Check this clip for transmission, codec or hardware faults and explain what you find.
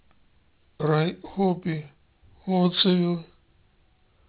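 One fault runs through the whole speech clip: aliasing. The sibilants and other bright sounds come out gritty and metallic, with false tones that don't belong to the voice. The sample rate was reduced without first removing content above the new half-rate, which fits a drop from 16 kHz to 8 kHz. Energy above 4 kHz folds back below it, landing around 10 dB under the speech. A spectrogram shows mirrored streaks packed hard against a 4 kHz ceiling.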